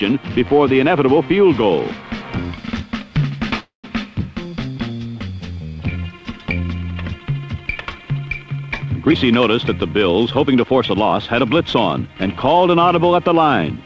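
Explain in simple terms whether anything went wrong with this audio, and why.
Two things go wrong. From 3.60 to 3.86 s there is a call audio freeze: the sound stretches into a fading buzz and then about 0.13 s of silence, likely because packets were delayed and the receiver ran out of audio. Unlike a dropout, nothing is lost. When the audio returns it carries on exactly where it stopped, only later.

From 9.03 to 11.13 s comes a jitter buffer speed-up. The receiver trims tiny slices, roughly a fifth of a second in total, to cut the delay, so the sound runs about 11% fast and feels hurried. Unlike a simple speed change, the pitch stays the same.

The sound also has nothing above 8 kHz, which fits the G.722 call codec it passed through.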